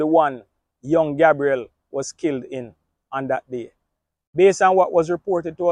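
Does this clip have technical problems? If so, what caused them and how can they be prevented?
No, nothing technical goes wrong anywhere in this clip, so there's nothing here that needs fixing or preventing.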